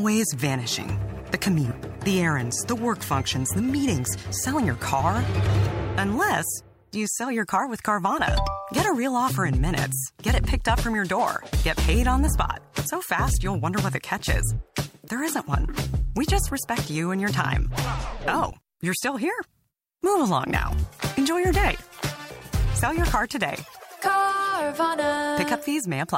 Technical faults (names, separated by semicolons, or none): none